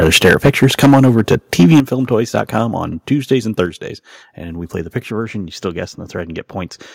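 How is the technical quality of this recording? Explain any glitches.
The recording has clear technical problems: heavy distortion early on, several sudden drops in level, and a thinned top end in the last couple of seconds.

From 0.02 to 1.8 s the speech sounds harsh and crackly, with a gritty edge on every loud syllable. This is microphone overload. The peaks run about 12 dB past full scale, so their tops are sheared flat, in the region of 7 percent of samples. A briefer, milder burst at 2.36 to 2.58 s, only about 2 dB over, flattens well under one percent of samples and adds a slight rasp. The likely cause is an input gain set too high for the converter.

The level drops abruptly three times: at 0.26 s by about 2 dB, at 1.8 s by about 8 dB, and at 3.66 s by about 5 dB. Voice and background fall together, and there is no fade. This is the microphone volume being stepped down, likely by call software reacting to the clipping. 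The large 8 dB step lands exactly where the heavy overload ends, so it sounds like the gain was cut in response to the distortion.

From 5.11 s to the end, the speech turns slightly dull and veiled at the very top, losing some of its crispness. This is channel delay causing comb filtering. One channel trails the other by roughly two samples, about 0.05 ms, and the two are summed to mono. Content common to both cancels near 10 kHz, which carves a notch there and dulls the sibilance and air.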